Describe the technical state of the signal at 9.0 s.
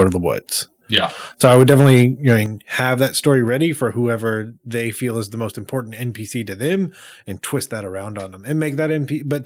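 At 9.0 s the speech signal is intact, with no audible fault at that moment.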